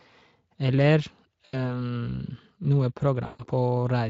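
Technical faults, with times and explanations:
1.45–1.74 s and 3.25–3.44 s, VoIP packet loss concealed by the speech codec: at these two spots the audio briefly turns into a smeared, buzzy stretch that sags in level and then recovers. About 80 ms goes missing in the first and about 140 ms in the second, so more audio is lost in the later one. The Speex decoder fills each gap by repeating its last pitch and spectral shape at falling gain, and because each frame builds on the one before, the voice stays weak or distorted for a moment after the packets come back.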